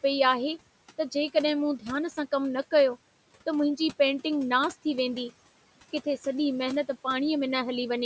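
Noise suppressor artifacts run through the whole speech clip. The suppressor estimates the steady room noise frame by frame and pulls those bands down by about 18 dB, so the background drops away in the pauses and swells back up under each phrase. That pumping tied to the speech, rather than a constant hiss or a fixed band loss, is what marks it as suppression and not simply a noisy room or a filtered line.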